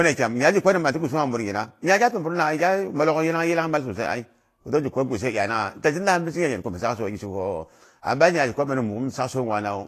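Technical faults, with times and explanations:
Throughout: Vorbis compression. The speech sounds hissy and grainy with a dulled top end and smeared consonant attacks, likely from low-bitrate Vorbis coding, consistent with roughly 34 kbps.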